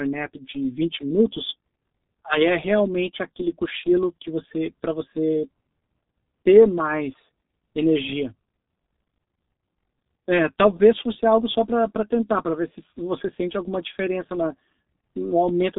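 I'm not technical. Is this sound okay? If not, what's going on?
No. The whole recording went through the G.723.1 codec, an old internet-phone format. Everything above about 3.8 kHz is gone, so speech sounds muffled, hoarse and smeared.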